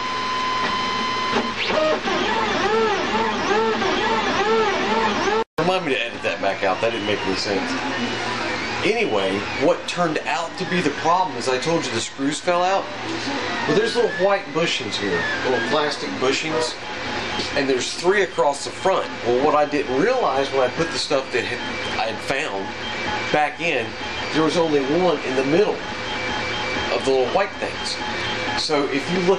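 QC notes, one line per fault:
Nothing stood out on listening to the audio.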